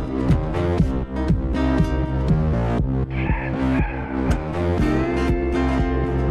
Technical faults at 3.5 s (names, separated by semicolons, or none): none